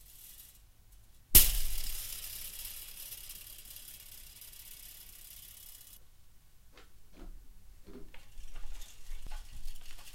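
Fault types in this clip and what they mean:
Compressed frames skipped: at 9.27 s about one whole frame of the coded audio is never played, so the sound jumps ahead by roughly a tenth of a second, which fits a frame length of 92.9 ms. On a waveform the envelope shifts abruptly with no gap. On a spectrogram there is a vertical seam where partials break off and resume out of step.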